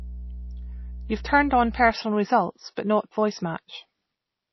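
From the start to 1.91 s, mains hum sits under the speech. It is a steady low tone at 60 Hz, about 15 dB below the speech level. Power-line current has leaked into the signal path, through a ground loop or a nearby transformer. The tone holds constant behind the speech. Then it stops at 1.91 s and the background clears.

Across the whole clip, the speech sounds watery and swirly. Nothing is present above 5.8 kHz, so the top end is cut off flat. The cause is likely MP3 compression at a very low bitrate, which fits something near 24 kbps. With so few bits, the encoder drops weak frequency components, and they flicker in and out between frames. The damage is plainly audible, and s sounds turn chirpy and metallic.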